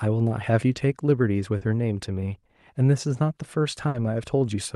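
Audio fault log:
1.57–1.62 s, short concealed packet loss: about 40 ms of the speech failed to reach the decoder in time. The receiver covered the hole by extending the last sound it had, carrying on its pitch or its noise shape, then blended back into the real signal. That is why this spot comes across as a brief smear or wobble, and whatever fell in those 40 ms is simply absent.
3.88–3.95 s, burst of packet loss: a longer run of audio, about 60 ms in all, was lost or arrived too late to be played. The receiver stretched the preceding sound across the gap and lowered its level as the gap went on, so the moment is heard as a held, fading tail. Speech then picks up further along, with the intervening 60 ms gone rather than delayed.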